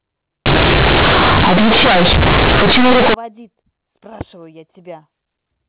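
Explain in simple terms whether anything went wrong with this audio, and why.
From 0.46 to 3.14 s the speech turns into harsh, loud buzz: companded audio read as linear, with A-law telephone bytes played as plain 8-bit samples without being expanded.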